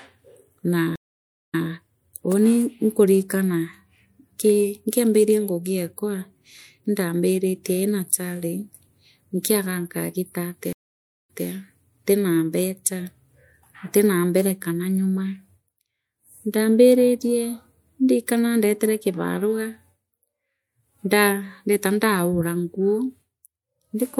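At 0.96 s and again at 10.73 s the speech drops into dead silence, about 576 ms the first time and 561 ms the second, then picks up slightly behind where it stopped, repeating about 157 ms and 183 ms of what came before. Both gaps, ending at 1.69 s and 11.47 s, are stream reconnects: the connection broke, the player restarted its decoder mid-stream, and the server resent a short burst of audio.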